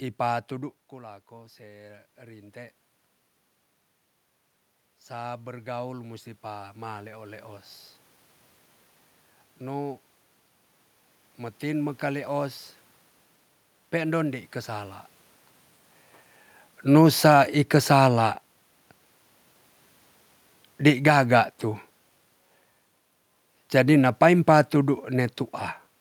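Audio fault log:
0.49 to 15.0 s, automatic gain rising: Just after half a second the talker moves away and the speech drops by about 14 dB. Over the next fourteen or so seconds the level climbs back slowly, and the room noise swells along with the speech. The automatic gain control judged the input too quiet and raised its gain gradually, by about 13 dB in total.
16.82 to 25.41 s, automatic gain falling: The talker moves again around 15 s. From 16.82 s the speech sinks steadily over roughly eight and a half seconds, and the room noise fades down with it rather than staying put beneath the speech. The automatic gain control found the input too loud, or its background noise too strong for the gain it started with, and pulled its gain down gradually, by about 6 dB, which is why speech and background drop together.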